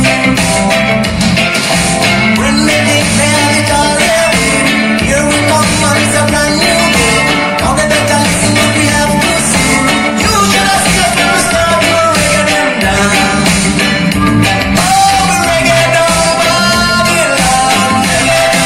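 Hard clipping runs through the whole clip. The level was pushed about 4 dB past what a stage could pass. Peaks are sliced flat, though only a small fraction of the signal goes over. That shows up as brief crackle on the loudest moments, with added upper harmonics.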